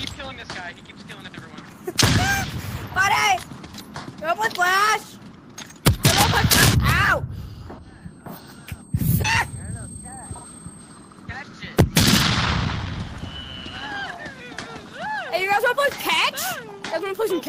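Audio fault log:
7.77 s and 9.24 s, compressed frames skipped. The sound jumps ahead by about 150 ms, then about 400 ms. The jumps suggest roughly five and fifteen lost 26.1 ms frames.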